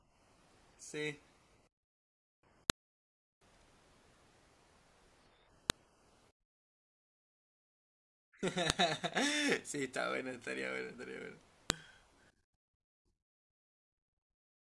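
At 2.70, 5.70, 8.70 and 11.70 seconds there's a sharp, loud click cutting into the speech, spaced exactly 3 seconds apart. That's a file header played as audio: the stream was stitched from 3-second WAV pieces without stripping each one's header, so those few dozen bytes of metadata get read as samples. They come out as a brief snap at every join, no matter what the speech is doing at that moment.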